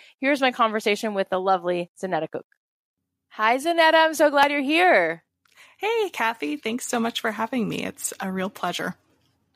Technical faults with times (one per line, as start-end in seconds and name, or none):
none